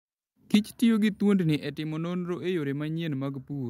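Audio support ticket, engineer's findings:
Input gain likely set too high at the converter: microphone overload at 0.54 to 0.56 s, peaks driven about 5 dB past full scale, about a fifth of samples flattened, giving harsh crackle.

Microphone volume stepped down, likely by the call software's gain control reacting to clipping: sudden level drops at 0.55 s (about 4 dB) and 1.56 s (about 6 dB), voice and background together.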